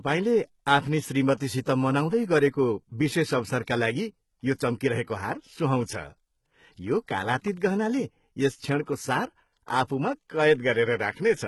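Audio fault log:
Throughout: HE-AAC compression. Sibilants sound gritty and lispy, and nothing is heard above 11.8 kHz. This is likely spectral band replication at a very low bitrate, around 16 kbps.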